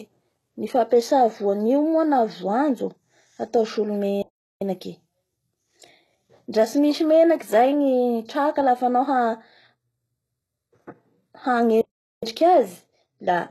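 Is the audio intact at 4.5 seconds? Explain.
No. At 4.5 seconds the clip sits inside a playback stall running from 4.22 to 4.61 s, roughly 390 ms. The likely cause is that the player either ran out of data or had its thread blocked, so it sent nothing to the output until it recovered. The speech simply stops mid-flow for that stretch, a clear gap of silence, before the sound carries on.

The same moment also carries the HE-AAC compression damage that runs through the whole clip, likely from encoding at about 16 kbps. The codec keeps only the lower spectrum and regenerates the treble by copying lower bands upward under a coarse envelope. That upper range is therefore an approximation whose harmonics don't line up with those below the crossover. Nothing reaches above 12.3 kHz, and the codec damage is plainly audible on either side of the gap.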